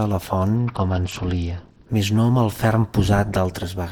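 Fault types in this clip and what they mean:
Bluetooth SBC bit pool drop: From 0.56 s to 1.89 s the treble goes dull and a gritty, granular noise rides on the sound, then clears as the rate recovers. The link was congested and the sender cut the SBC bit pool, so the highest sub-bands got few or no bits and the rest were coarsely quantised. The degree of dulling fits a fall from a bit pool of about 31 to about 9, near 72 kbps.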